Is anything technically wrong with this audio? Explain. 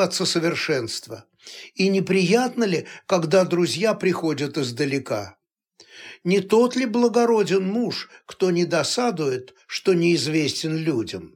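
Yes. Throughout the clip, the resampler restarted on every block. Each 20 ms block of the 44.1 kHz to 48 kHz conversion was converted alone, leaving a small error at every edge. Those errors repeat at 50 per second, heard as a buzz present only with signal.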